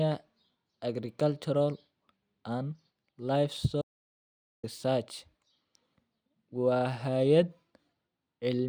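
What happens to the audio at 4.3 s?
The input signal was likely lost, leaving an audio dropout to silence from 3.82 to 4.63 s: the speech cuts off into dead digital silence, with no room tone, for about 0.82 s.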